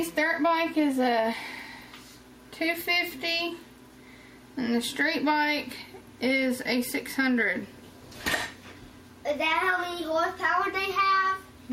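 Nothing is technically wrong with this audio clip.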